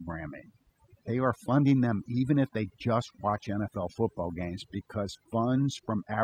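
From the first second to the end there's a mains buzz sitting under the speech, a rough, raspy drone built on 50 Hz, roughly 25 dB below the voice. Sharp spikes from a dimmer, rectifier or bad shielding are getting in twice per cycle, so harmonics stack up well into the kilohertz range.

Running alongside it the whole way is overdone noise removal. The reduction was pushed so hard that frequency bands near its noise estimate get cut away, taking quiet parts of the voice with them. The background drops and breaks up into twinkling specks.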